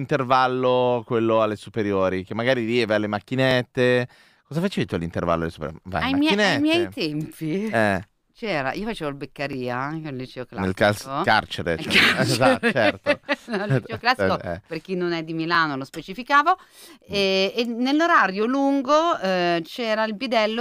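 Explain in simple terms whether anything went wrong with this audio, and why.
Yes, something went wrong: overlapping chunks. The audio was handled in 6-second pieces, and each piece began slightly before the previous one ended, so about 20 ms plays twice. You hear a small stutter at 3.51, 9.53 and 15.55 seconds.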